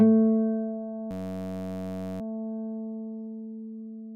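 From 1.11 to 2.21 s there's a system hang loop: the machine stalled while the sound hardware kept replaying one 10.67 ms chunk, which fits a 512-sample buffer, around a hundred times. You hear it as a steady buzz at 93.8 Hz.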